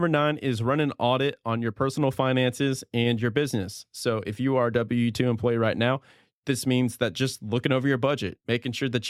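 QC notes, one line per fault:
No faults were found in this speech clip. There is nothing to log for it.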